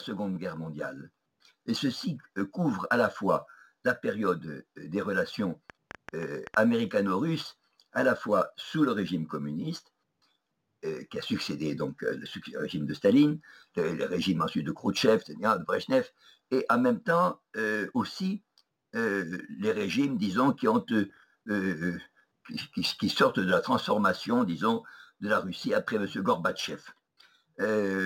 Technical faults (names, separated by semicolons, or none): train of clicks